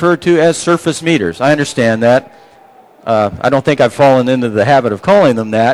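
Nothing here catches the ear as a technical fault; the audio just runs along without any glitch worth pointing out.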